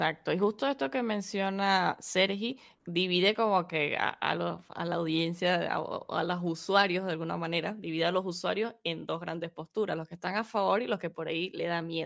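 No technical faults can be heard anywhere in it.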